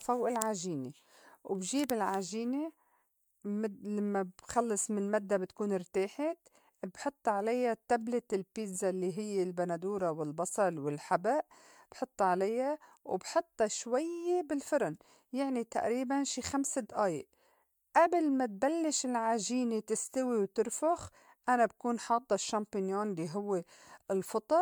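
Speech with generation loss throughout: the swirly, hollow smearing and blurred attacks exceed what a single 128 kbit/s MP3 pass reaching 20.1 kHz gives, likely from about four encodes.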